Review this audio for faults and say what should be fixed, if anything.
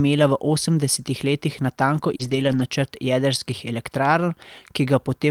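Right after "v osemdesetih letih natanko", around 2.15 to 2.21 s, there's a short concealed packet loss. About 40 ms of audio never arrived in time, so the decoder kept the previous sound going, extending its pitch or filling with shaped noise, and then blended back into the real signal. You hear it as a quick smear or wobble at that spot. Worth looking at jitter buffer depth and network stability so late packets still make it in.

Overlapping that, from about 2.19 to 2.61 s, up to "načrt jedrskih", there's a lost packet rebuilt from error correction. Roughly 220 ms, which fits a run of about eleven 20 ms packets, was played from the low-bitrate backup copies carried in the following packets instead of the originals. Nothing drops out, but that stretch sounds rougher and noisier than what's around it. To prevent it, fix the packet loss at the network level; FEC is only covering for it.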